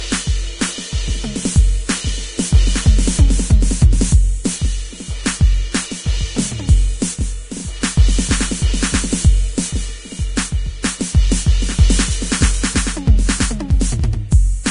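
Music, with nothing at all above 10.6 kHz anywhere in the clip. That hard ceiling points to low-bitrate audio saved at a high bitrate: likely an earlier encode around 32 kbit/s, re-saved as a generous MP3 that can't bring back the missing top end.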